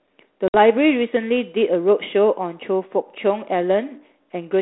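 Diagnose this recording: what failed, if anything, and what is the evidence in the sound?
The network stage failed, causing packet loss on an ADPCM call. At 0.48 s the speech cuts to a hard-edged silent gap lasting about 60 ms, roughly three packets. The G.726 decoder's predictor and step size drift from the sender's. Speech resumes at 0.55 s mistracked, then recovers.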